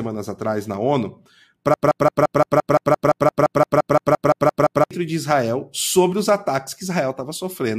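A speech recording with a broken-record loop from 1.74 s to 4.91 s. A short fragment, about 172 ms long, repeats exactly and back to back, 18 times in a row. The result is a rapid, mechanical stutter lasting just over three seconds. Whatever speech should have filled that stretch never arrives, so it is simply missing. This is likely a stalled player, encoder or stream that kept resending the last piece it held.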